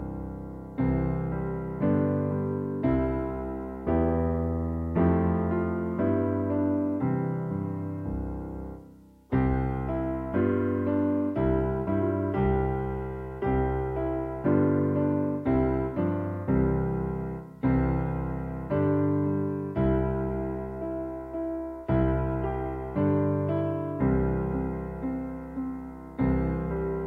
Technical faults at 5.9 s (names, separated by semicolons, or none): none